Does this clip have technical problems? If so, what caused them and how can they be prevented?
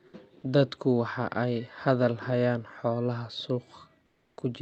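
Yes. From 4.05 to 4.37 s, a stretch of about 320 ms, the quiet background is replaced by a smooth, featureless hiss that sits about 12 dB lower than the room tone around it. This is comfort noise in place of the background, likely from Opus discontinuous transmission (DTX): with no speech detected, the sender stopped sending audio and the receiver filled the gap with synthetic noise. The background here is only about 43 dB below the loud parts. The call codec's band limit sits around 8 kHz. To prevent this, turn off DTX in the Opus encoder, or set the voice detector so it does not drop low-level background.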